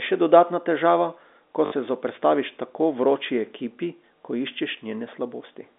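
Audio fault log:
1.66 to 1.72 s, packet loss with last packet repeated: between "dodatna težava ko" and "se zoperstaviš tako" the speech briefly stutters with a robotic buzz, as about 60 ms went missing and the receiver replayed the last packet, which fits three 20 ms packets.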